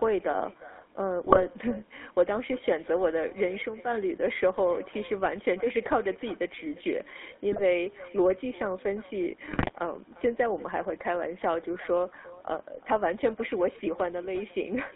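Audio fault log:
Throughout, echo with no canceller: the far end is playing the call on a loudspeaker, and its microphone sends that straight back, so every phrase gets a ghost about four tenths of a second later, sitting roughly 18 dB down. Nothing on that side strips it out, so you hear a fainter, thinner copy trailing the speech after the network round trip. It never lets up.
Throughout, GSM full-rate codec: the speech has that gravelly, buzzy texture of the original GSM coder, at 13 kbps, which rebuilds the voice from a vocal-tract model driven by a sparse, regularly spaced pulse train. Only a fraction of the real excitation survives, which is where the roughness comes from. The band is squeezed to roughly 200 Hz to 3.6 kHz, so everything sounds boxed-in and dull, and the coding damage is plainly audible, not subtle.
1.26–1.41 s, 5.23–5.28 s, 7.52–7.62 s, 9.48–9.71 s, GSM bit errors: four bursts where the link got noisy and corrupted bits made it into the decoder. 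When the filter, pitch or gain parameters get scrambled, a frame comes out with a warped spectrum or a sudden level jump, so you hear squawks, pops and a gargly break in the speech. The first and last bursts are the longest and roughest; the one near 5.2 s is a short blip.
3.42–4.34 s, loudspeaker feedback squeal: a loudspeaker is feeding back into the microphone, and at about 6.2 kHz the loop gain tipped past one. That single tone climbs on its own over roughly a third of a second, then sits as a piercing whistle, about 10 dB above the speech, until it drops out near 4.3 s. It's well above the codec's band edge.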